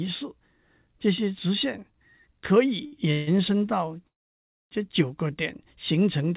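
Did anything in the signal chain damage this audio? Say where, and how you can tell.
Yes. The damage happened at the network and jitter-buffer stage of the call. At 2.86 to 2.94 s there is a short stall from a late packet. A packet arrived late, so the receiver stretched the last sound for about 61 ms and then resumed from the same point, with nothing lost. On a waveform this shows as a repeated, overly regular cycle. On a spectrogram the harmonics run flat and smeared for that short span, with a faint buzz or dip.

There are two call audio freezes, likely caused by packets held up in transit that emptied the jitter buffer. From 3.12 to 3.29 s the last sound is carried on for 148 ms as a decaying buzz or hiss, with no silence. From 4.07 to 4.73 s the fill lasts 640 ms, and about 620 ms of it is silence. On a spectrogram the energy smears and then fades to a blank band, and the waveform goes flat. 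The audio then resumes where it stopped, so the gap is added delay rather than lost material. Throughout the clip the band stops at 4 kHz, which fits a narrowband G.711 call path at 64 kbps.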